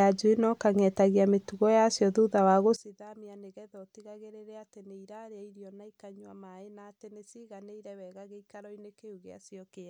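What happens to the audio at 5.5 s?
At 5.5 s the speech has collapsed to a faint residue about 22 dB down, from 2.76 s after "mĩtugo yacio thutha wa" to the end. The likely cause is one channel inverted, cancelling centred content in mono; unlike a plain volume drop, the remnant is only the small mismatch between the channels.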